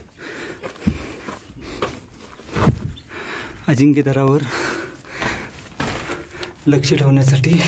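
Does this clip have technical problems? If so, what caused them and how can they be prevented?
Yes, gain pumping runs through the whole clip. The likely cause is input gain set far too high for the microphone, so a fast limiter or compressor keeps clamping down on every loud moment and releasing in between, a swing of around 10 dB. Loud and soft passages end up squashed close together in level. The band limit at 8 kHz comes from the call path. To prevent it, lower the microphone input gain so peaks stay well clear of the limiter threshold.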